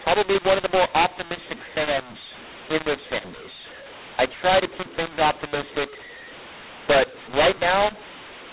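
From start to finish the speech carries a mu-law and A-law mix-up: samples coded with the mu-law curve are being expanded with the A-law curve, so each 8-bit code maps to the wrong level. Loud passages sound harsh and gritty, and the pauses fill with a steady hiss because the quietest codes land well above silence. On a waveform the gaps never return to a flat line. A spectrogram shows broadband smearing below the 4 kHz ceiling, which fits 8 kHz telephone sampling.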